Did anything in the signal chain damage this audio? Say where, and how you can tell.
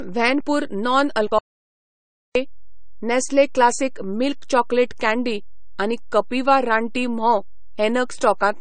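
Yes. At the converter or analogue input stage there is a DC offset for the whole clip. The waveform sits shifted off zero by a constant amount. You can't hear it, but it shows as steady energy at the very bottom of the spectrum and eats into headroom.

At the codec stage the speech carries nothing above 9 kHz, and two different flavours of compression artefact are audible at once. That points to transcoding between lossy codecs, likely an MP3 encode at around 64 kbit/s re-encoded to AAC-LC at around 32 kbit/s, with each pass adding its own damage.

From 1.39 s to 2.35 s the audio drops out to silence, losing about 0.97 s. The gap is silent with no room tone, and the speech cuts off and resumes mid-flow. The likely cause is the input device or link disappearing while the encoder kept writing silence.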